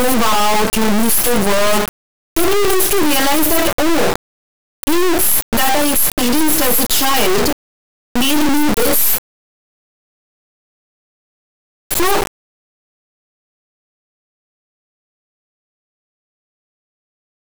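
From start to finish the speech comes out as an extremely loud, buzzing square wave that drops to silence in the quietest passages. This is integer read as float: 32-bit integer samples were interpreted as 32-bit floats, so values swing between near-zero and far beyond full scale, slamming against the clipping limit.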